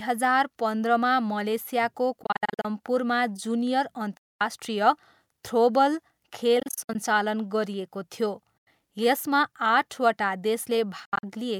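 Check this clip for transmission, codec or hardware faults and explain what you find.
Speech in the clip has five stretches of abrupt silent gaps, at 2.23–2.65 s, 4.17–4.41 s, 6.60–6.95 s, 8.58–8.67 s and 11.05–11.24 s. These are likely Bluetooth dropouts, where late packets are discarded and the output mutes. The speech then resumes further along, as if it had kept playing, which distinguishes this from a stall that pauses and continues where it left off.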